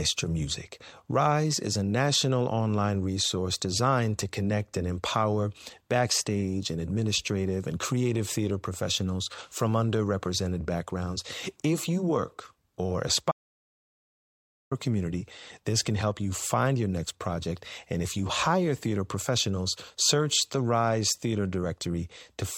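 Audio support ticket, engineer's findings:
Audio dropout to silence, 13.32–14.71 s, after "you work or": 1.4 s of silence, no room tone. Input link likely lost while the recorder kept writing zeros.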